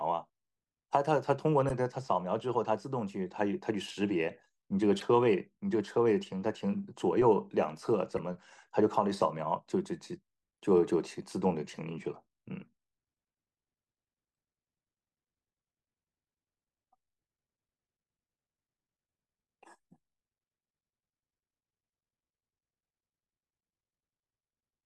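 Speech with four short bursts of damaged data in a compressed stream, at 1.69 to 1.71 s, 5.00 to 5.02 s, 8.17 s and 10.55 to 10.57 s. Each lasts roughly 20 ms and sounds like a brief chirp or blip. Corrupted bytes in the encoded stream cause the decoder to misread the affected frame, lose sync and hunt for the next valid frame header. That produces a momentary garbled fragment in place of the intended audio.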